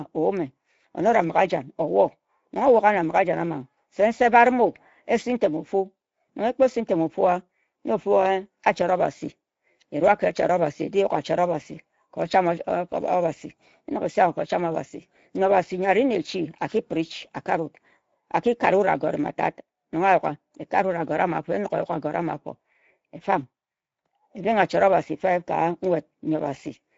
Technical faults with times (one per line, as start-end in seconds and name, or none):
0.00-26.98 Speex codec